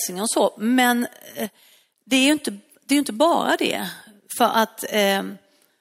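A speech recording. From 1.46 to 1.97 s the level falls abruptly by about 6 dB, then returns. The likely cause is one channel dropping out. With one stereo side gone, the mono sum keeps only half the shared signal.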